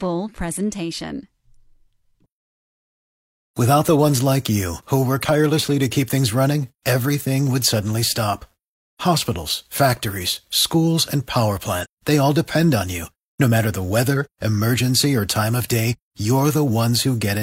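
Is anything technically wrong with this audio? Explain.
Yes, there's one glitch: compressed frames skipped, at about 11.80 to 11.86 s, right after "factories schools and power" and before "they all depend on". A few frames of the coded audio never got played, either missing or rejected by the decoder as damaged, so the sound jumps ahead by around 150 ms, roughly three frames, which fits a frame length near 46 ms.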